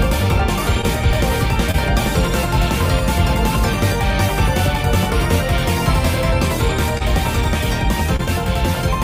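Short concealed packet loss shows up four times, at 0.81 to 0.85 s, 1.71 to 1.76 s, 6.98 to 7.02 s and 8.16 to 8.21 s. Each time about 20 ms of audio didn't arrive in time, and the receiver papered over it by extending the last sound, either from its pitch or as shaped noise, then blending back in. You hear a quick smear or wobble, and a brief sound may drop out.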